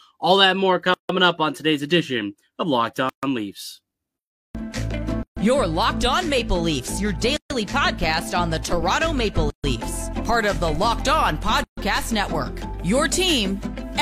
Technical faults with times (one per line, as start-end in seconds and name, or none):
0.94-1.09 gap at a join of encoded pieces
3.09-3.23 gap at a join of encoded pieces
5.23-5.37 gap at a join of encoded pieces
7.37-7.50 gap at a join of encoded pieces
9.50-9.64 gap at a join of encoded pieces
11.64-11.77 gap at a join of encoded pieces